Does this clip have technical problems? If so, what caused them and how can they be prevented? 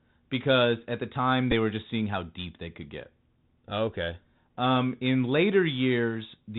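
Yes. Throughout the clip the link ran on the Bluetooth CVSD headset codec, which encodes the signal as a single up-or-down bit per sample at 64 kbps with an adaptive step size. Because the signal is confined to narrowband telephone bandwidth, nothing above 4 kHz survives, so the speech sounds muffled and boxy. The step size cannot keep up with loud, bright sounds, so sibilants come out scratchy and a grainy hiss sits under everything. This can be prevented by using a headset and phone that negotiate wideband mSBC or LC3 voice, or by recording through a wired or non-headset profile.

At 1.52 s there is a Bluetooth headset packet repeated fault, between "because at the time" and "were just seeing how". Voice data between headset and phone was lost for about 7.5 ms, which fits two dropped packets, and the chip filled the gap by decoding the previous packet's bits again. Repeating the same 3.75 ms slice twice gives a short burst of the repeat near 267 Hz before good packets return. 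This can be prevented by keeping the headset close to the phone, with no body or obstacles in between and less 2.4 GHz interference nearby.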